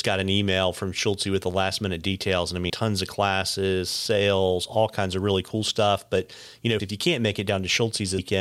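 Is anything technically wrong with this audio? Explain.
Yes. The speech has compressed frames skipped at three points. At 2.69 s, just before "tons of classes sales", about 70 ms of audio vanishes. At 6.79 s, between "you know" and "if you", about 300 ms goes. At 8.18 s, about 400 ms is lost. Whole frames never reach the output, so the speech lurches forward. The gaps fit roughly 3, 10 and 15 frames of about 26 ms. Each join is an abrupt jump ahead in the speech.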